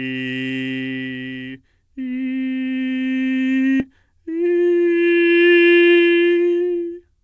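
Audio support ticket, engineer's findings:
Skip ahead at 3.80–3.82 s: music jumps forward with no fill. About a second of material is gone and the two sides are butted together. Jitter buffer discarded queued audio, cutting playout delay by roughly a second.

Jitter buffer speed-up from 3.94 to 6.91 s: music plays at 119% speed, pitch unchanged, tempo visibly rushed. The receiver repeatedly cut pitch-period-length segments, about half a second in total, to drain the excess buffered audio. The G.722 path limits the band to 8 kHz throughout.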